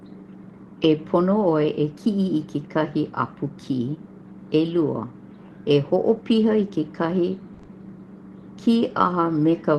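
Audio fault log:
7.53–7.61 s, burst of packet loss: about 60 ms of consecutive audio failed to arrive in time, so the receiver carried the last sound forward and let it fade, producing a held, dimming tone or hiss before the sound resumes later with that stretch gone. What separates it from the shorter concealed losses that follow is its length. The concealment runs long enough to audibly decay, and a longer stretch of actual content is missing.
7.61 and 7.65 s, short concealed packet loss: two further gaps of 20 ms each follow straight on from the burst, ending at 7.69 s. Each hole was patched by extending the preceding sound, from its pitch if voiced or as shaped noise otherwise, then blended back into real audio. The result is a brief smear or wobble rather than a fade, too short to decay. The call went through the Opus call path, band-limited at about 12 kHz.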